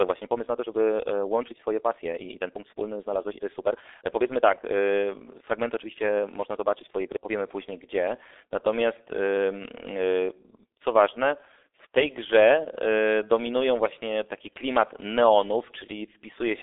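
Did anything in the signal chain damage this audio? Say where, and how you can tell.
Yes. At the codec stage, G.723.1 coding at 6.3 kbit/s runs throughout. Nothing passes above 3.8 kHz, and its slow voice model leaves speech muffled, hoarse and blurred.

From 0 to 7.3 s, up to "później gdzie", the speech runs about 1.48 times faster but keeps its pitch and sounds rushed. The likely cause is a time-stretched section dropping short pieces.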